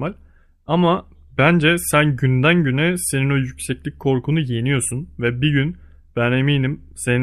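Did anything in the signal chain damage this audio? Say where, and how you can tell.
No, nothing along the chain has left any audible damage on this speech recording: the signal stays continuous, at a steady level and with an intact spectrum, across the whole clip.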